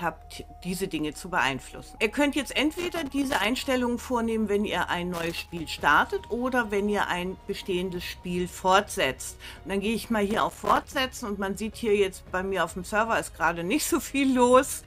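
Loose connector crackle breaks out at 2.72–3.45 s, 5.14–5.60 s and 10.31–10.87 s. A worn or dirty contact repeatedly makes and loses connection, chopping the signal, so each burst sounds like irregular scratchy crackle.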